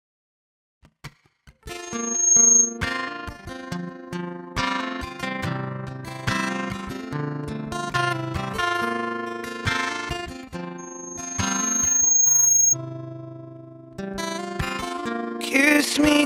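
Two bursts of loudspeaker feedback squeal sit on this audio, both on the same tone near 6.5 kHz. The first runs from 1.82 to 2.79 s and swells up in about half a second. The second, from 10.78 to 12.76 s, creeps in more slowly over roughly a second and a half. Each peaks about 10 dB above the programme. A mic is hearing its own speaker, and the loop gain tops unity at that one frequency.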